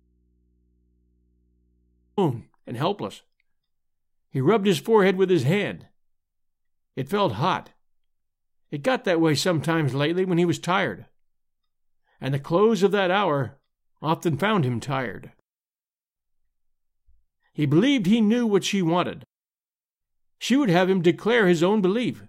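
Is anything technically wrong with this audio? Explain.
Yes, there's an audio dropout to a faint residue already under way when the speech starts, lasting until 2.18 s, where it snaps back at "and helpless." The gap holds only mains hum, roughly 45 dB below the speech, so the input was likely left open and live while the signal was cut off.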